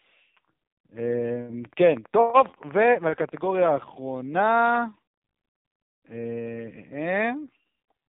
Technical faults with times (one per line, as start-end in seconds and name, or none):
0.00-8.09 AMR narrowband mobile codec